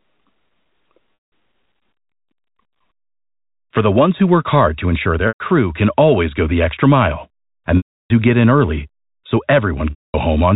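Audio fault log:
1.18–1.32 s, 5.28–5.40 s (after "work hard to ensure"), 7.77–8.10 s (after "the extra mile and") and 9.90–10.14 s (after "get in early so"): packet loss with pitch repetition. A briefly held, buzzy tone fades away, into silence at the longer gaps, and the sound returns through a short cross-fade. The receiver repeated the last pitch period to cover between 120 and 330 ms of lost audio.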